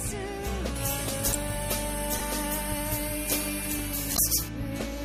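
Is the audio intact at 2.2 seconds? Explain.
No. At about 2.19 s a repeated buffer occurs: one tiny slice, about 2.7 ms long, plays three extra times, which fits a 128-sample buffer. The hard joins give a brief buzz rather than the silent gap of a dropout, and a few milliseconds of new audio are skipped.

Pre-emphasis left on also covers this moment, from 0.76 s to 4.48 s. An FM-style 75 µs treble boost was never undone, leaving 10 kHz about 13 dB above 1 kHz. The result is a steady thin, sibilant brightness, not a fluctuating artefact.

MP3 compression runs throughout, with plainly audible watery, swirling treble that points to a low bitrate around 64 kbps. This is likely the cause, and unlike the fixed pre-emphasis tilt, the damage flickers from frame to frame.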